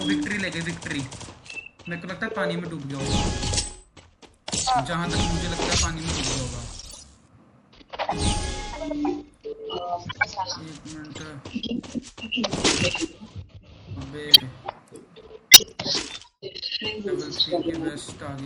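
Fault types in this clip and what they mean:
MP3 compression: a watery, swirly texture with dulled treble throughout, likely from MP3 encoding starved of bits, which fits a bitrate near 64 kbps.
Corrupt frame decoded: brief chirps and noise bursts at 3.97, 5.77, 6.81, 10.06 and 15.51 s, where damaged compressed frames were decoded anyway, misplacing energy in frequency.
Compressed frames skipped: short smeared blips at 11.09 and 14.28 s as the audio jumps ahead by about 30 ms, because whole compressed frames were never played.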